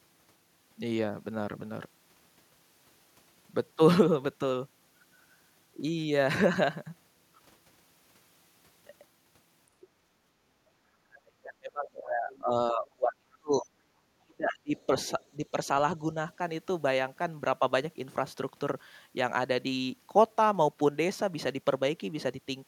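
A short recording of speech with echo-canceller trouble clustered in the middle. From 10.13 to 10.38 s the room sound behind the talker sinks by about 7 dB and then comes back. That is background gated by the echo canceller: while the loudspeaker was active, the canceller pulled the microphone down to keep echo out, taking the ambience with it. From 10.66 to 13.69 s the talker's voice itself collapses, at worst by roughly 35 dB, across about three seconds. Shorter dips follow from 14.17 to 14.90 s, reaching roughly 30 dB, and from 15.35 to 15.57 s, shallower at around 10 dB. The cause is likely speech suppressed in double talk. With both ends talking at once, the canceller could not tell the local voice from loudspeaker echo, so it attenuated everything. Inside those suppressed stretches, faint scraps of a second voice surface at 12.35 to 12.41 s and 14.76 to 14.85 s, sitting very low, around 30 dB under the main speech. 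These bursts are likely the other side's voice leaking through: the far end playing from the device's loudspeaker reached the microphone, and the canceller left brief residues of it in the signal.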